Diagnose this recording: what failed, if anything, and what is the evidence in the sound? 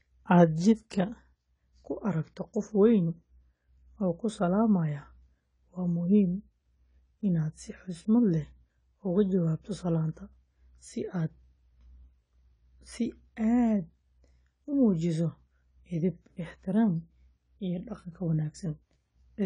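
The speech sounds dull and swirly from start to finish, with nothing above 10 kHz and the smeared, watery texture that low-bitrate coding leaves. The failure sits at the codec stage and is likely low-bitrate audio saved at a high bitrate. An earlier encode, one that fits something around 24 kbit/s, stripped the top band and left those artefacts. The later MP3 pass at a generous bitrate only preserved that damage.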